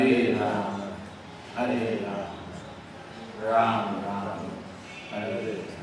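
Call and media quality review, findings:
No faults found: level, continuity and timing hold steady throughout, with no audible defect in the signal path.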